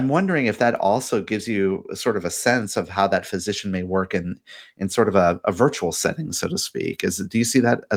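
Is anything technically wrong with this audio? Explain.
No, nothing technically wrong.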